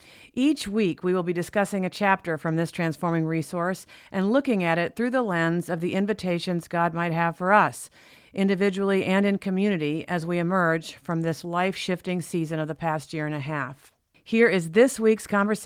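No technical faults can be heard in this speech recording. The Opus voice compression is working as intended, with the band reaching up to about 19.9 kHz and only a light coding texture, which fits Opus in hybrid mode at around 24 kbps.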